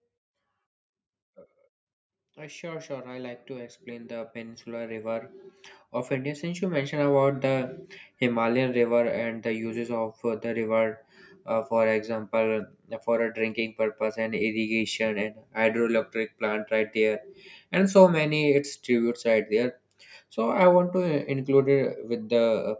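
Speech recorded through call microphone processing, with nothing above 8 kHz. Automatic gain rising occurs twice. From 2.34 to 5.35 s the level climbs by about 12 dB. From 6.08 to 7.22 s it climbs about 5 dB more. Voice and background swell together as the gain control compensates for quiet input.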